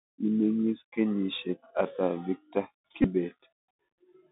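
Speech carried over a Bluetooth CVSD headset codec: the band runs only from about 200 Hz to 3.7 kHz, sibilants turn scratchy, and a granular hiss sits under the voice. From 3.02 to 3.08 s, just after "kenyisiek ata victor", a Bluetooth headset packet repeat replays stale audio for about 18.8 ms, a brief buzz near 267 Hz that fits a run of five lost packets.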